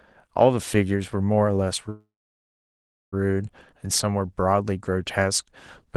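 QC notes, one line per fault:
1.89–3.14 s, call audio freeze: the speech stops and a brief fading continuation of the last sound trails off into about 1.06 s of silence, likely because packets stalled in transit and the jitter buffer ran dry. Unlike a dropout, no speech is lost. When delivery resumes, the sound picks up exactly where it halted, so about 1.23 s of gap has been inserted and everything afterward plays that much later.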